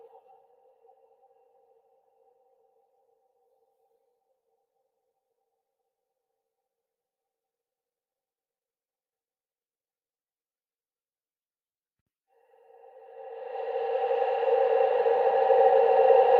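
Across the whole clip, a noise suppressor built for speech is applied to this non-speech material. It treats sustained tones, ambience and decays as noise, so its gain reduction swings by around 20 dB, pulling steady parts down while sharp onsets pass largely intact.

From 0.0 to 4.86 s, the suppressor classifies the sound itself as noise and attenuates it more than elsewhere, reaching about 22 dB at its deepest across roughly four seconds of that span. Sustained and fading portions sink or lose their tails, while abrupt events mostly survive.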